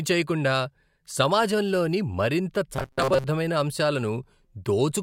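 Speech, with a stretch of robotic sound from repeated short buffers from 2.76 to 3.26 s, right after "సమాజంలోని మరింత". For that half second the speech becomes a rigid metallic buzz at 133 Hz that still loosely tracks the syllables. The likely cause is audio arriving too seldom, so the last block of about 7.5 ms (one cycle of 133 Hz) is replayed over most of the span in place of the real sound. Unlike a dropout or gap, the sound never goes silent, and unlike mains hum, the buzz sits on the speech itself and stops when normal flow returns.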